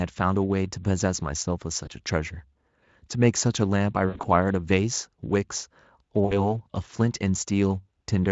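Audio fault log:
1.85–1.89 s, 4.07–4.25 s and 6.25–6.54 s: VoIP packet loss concealed by the speech codec. Lost packets were covered by the decoder repeating its last pitch and filter with falling gain, so the sound smears into a buzzy, fading tone instead of dropping to silence as a plain dropout would. The first gap fits a single lost 20 ms frame. The middle one is the longest, with gaps scattered across about 160 ms and the longest run about 80 ms. The last hides about 60 ms. Each gap is followed by a weak stretch before the Speex signal recovers.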